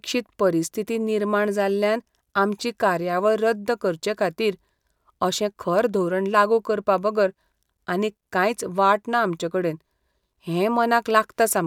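Listening to this speech recording, nothing technically wrong stood out at any point.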